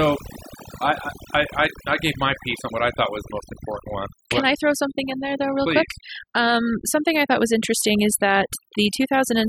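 Overdone noise removal runs the whole way through: the denoiser clamps bands near its noise estimate, so the background goes dead with twinkly specks.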